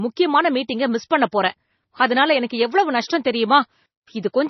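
Speech with heavy MP3 compression damage throughout. Nothing sounds above 5.9 kHz, and the sound is watery and swirly, likely from a low bitrate around 24 kbps.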